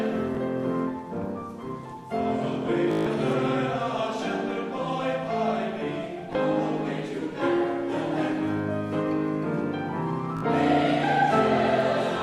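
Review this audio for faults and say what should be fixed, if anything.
Bluetooth stutter occurs at 0.35 s (one 19 ms slice), 2.91–3.06 s (149 ms, a buzzing run that fits about eight lost packets), 6.33–6.35 s (19 ms), and 10.37–10.43 s (56 ms). The receiver kept replaying its last short buffer while data was missing, then jumped ahead. In the waveform, identical short segments repeat. On a spectrogram, the events appear as evenly spaced vertical stripes. Shortening the link distance, reducing 2.4 GHz interference, or recording over a wired connection would prevent it.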